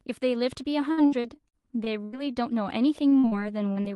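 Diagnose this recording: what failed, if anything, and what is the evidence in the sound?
The network stage failed, causing repeated packet loss (robotic sound). The speech breaks up from 0.91 to 2.16 s and again from 3.09 to 3.93 s. Each hole, up to 82 ms and 41 ms long, is patched by extending the last sound. The result is choppy, with pieces missing.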